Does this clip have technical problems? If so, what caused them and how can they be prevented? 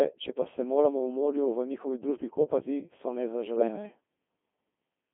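Yes. The whole clip passed through a Codec 2 vocoder. The encoder kept only pitch, voicing, energy and a coarse spectral envelope, consistent with the 2.4 kbit/s mode, and the decoder rebuilt the sound from sine waves instead of the original waveform. The damage is heavy: the speech is robotic and buzzy, confined to roughly 200 Hz to 3.5 kHz, with natural texture replaced by synthetic tones. Prevent this by using a higher-rate, waveform-preserving codec when the link allows.

From 3.56 to 3.68 s, just after "njihovi družbi kopati so", bit errors on digital voice radio corrupted the vocoder's parameters. The error rate was around several percent, and the affected stretch fits about three frames. Because each bit sets the pitch, level, voicing or spectrum of a whole frame, the synthetic sound briefly lurches in pitch and loudness and breaks into a warbling burst. Prevent it with stronger signal coverage or more robust forward error correction on the channel.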